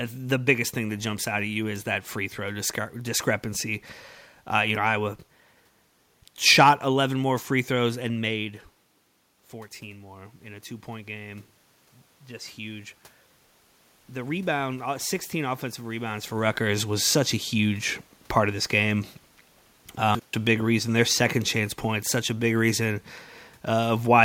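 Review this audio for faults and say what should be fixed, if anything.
Automatic gain rising, 9.52 to 16.34 s: the input fell about 12 dB, so the gain control crept up about 7 dB, swelling voice and room noise together. To prevent it, set the microphone gain manually, or slow the gain control's response so that brief level changes from a talker moving don't make it ramp.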